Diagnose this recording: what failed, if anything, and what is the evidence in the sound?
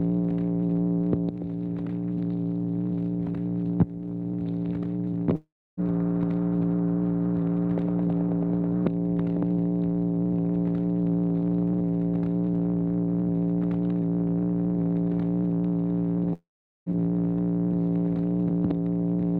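Two gaps from 5.35 to 5.80 s and from 16.33 to 16.89 s point to a long network dropout at the network stage, likely from lost packets on the call path. In each, the last sound smears into a fading buzz or hiss and then goes silent for roughly 0.3 s and 0.4 s. The sound resumes further on, about 0.42 s and 0.54 s lost. A short packet loss would be concealed smoothly; here the concealment runs out and nothing is recovered.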